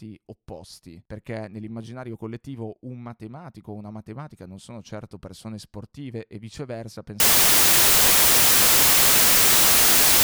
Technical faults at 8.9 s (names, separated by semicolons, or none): samples built from the wrong bytes